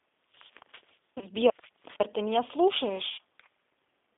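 G.729 codec damage runs through the whole speech clip. The sound is confined to roughly 250 Hz to 3.6 kHz, and its roughness points to the 8 kbit/s G.729A variant. Each 10 ms frame is rebuilt from a vocal-tract filter, a pitch predictor and a handful of pulses rather than the actual waveform, so the speech is plainly coarse and faintly synthetic, with no top end.

VoIP packet loss concealed by the speech codec appears from 1.18 to 1.26 s and again from 3.12 to 3.19 s. About 30 ms of audio is missing in the first gap, which fits one lost packet, and about 60 ms in the second, which fits two. In both, the decoder keeps extending its last pitch and filter settings while lowering the gain. This stretches the speech into a short buzzy tone or coloured noise that fades, and because each frame builds on the previous one, the sound stays weakened briefly after the stream resumes.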